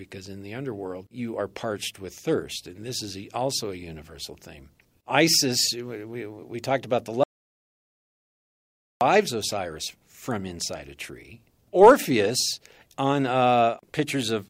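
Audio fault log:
7.24–9.01 s: audio dropout to silence. The speech cuts off mid-flow and nearly 1.8 s is lost to silence with no room tone, most likely from the input briefly disconnecting or muting while recording continued. The waveform shows a flat line, and the spectrogram an empty black band.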